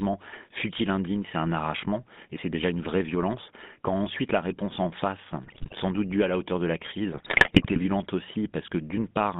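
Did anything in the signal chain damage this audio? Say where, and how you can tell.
Yes. The speech passed through the GSM full-rate codec, the original mobile speech coder, across the whole clip. The audio is confined to a line band of 150 Hz to 3.6 kHz, and plainly audible buzzy, gravelly roughness fits the 13 kbps coder's pulse-driven excitation. A spectrogram would show a hard ceiling at 3.6 kHz.

GSM bit errors from a weak radio link appear twice. The first runs 5.44 to 5.73 s, after "la réponse en face" and before "sans doute due à". The second runs 7.12 to 7.80 s, after "la hauteur de la". Corrupted filter, pitch or gain values turn the audio into squawks and gargling. The spectrogram would show smeared formants, and the waveform would show abrupt level jumps.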